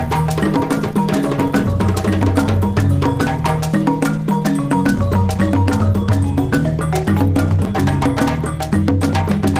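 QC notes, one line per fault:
Nothing stood out on listening to this clip.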